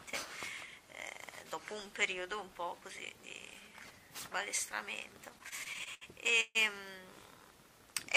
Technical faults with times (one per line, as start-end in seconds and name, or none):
5.29-6.57 repeated stalls (stutter)
7.13-8.17 filter restarted on every block